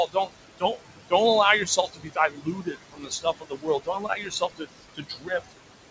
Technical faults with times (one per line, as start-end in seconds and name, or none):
0.00-5.91 noise suppressor artifacts
0.07-0.31 speech cut by the noise suppressor
0.58-0.81 speech cut by the noise suppressor
1.65-5.54 speech cut by the noise suppressor